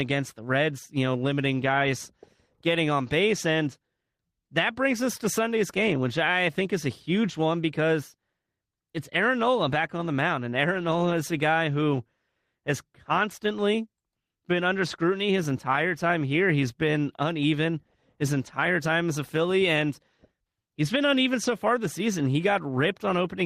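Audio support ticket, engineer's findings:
No audible faults found in this speech recording.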